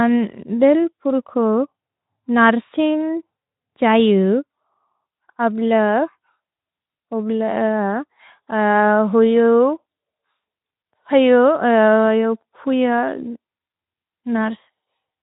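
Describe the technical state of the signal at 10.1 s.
At 10.1 s the speech is intact, with no dropout, click, distortion or other fault, just the narrowband sound of a Speex stream at 15 kbps with nothing above about 3.8 kHz.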